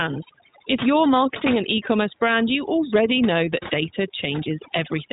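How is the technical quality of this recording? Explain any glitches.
The technical quality is poor. Two faults run through the whole recording, one stacked on the other.

Overdone noise removal is present from start to finish. A noise reducer set far too aggressively cuts individual frequency bands whenever their level sits near its noise estimate, so the softer parts of the speech are discarded along with the noise. The pauses fall to near silence dotted with twinkling, chirpy specks. Plain low-level filtering would dull the sound evenly rather than leave those isolated flickers.

The iLBC codec also shapes the entire clip, and its damage is plainly audible. This narrowband VoIP coder encodes each short frame independently, and the roughness here fits its 20 ms mode. The band stops at about 3.8 kHz, so sibilants and air are gone, giving a boxed-in telephone quality. Speech stays intelligible but sounds slightly gritty and synthetic. 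That frame-level graininess sets it apart from the noise reducer's bubbly band-flicker.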